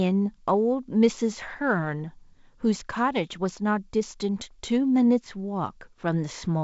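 Nothing in this speech recording points to a technical fault; it carries the character of G.722 wideband telephone coding at 56 kbit/s, with nothing above 7.7 kHz and the light coding noise that comes from the two-bit upper band and the slightly coarser lower band at this rate.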